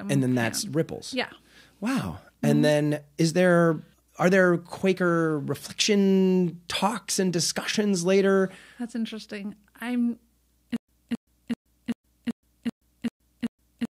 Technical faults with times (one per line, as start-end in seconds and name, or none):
10.76-13.93 stutter with silent gaps